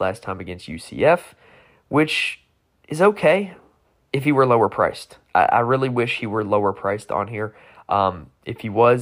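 Nothing goes wrong anywhere in this recording; there's no dropout, glitch or distortion to point to at any moment.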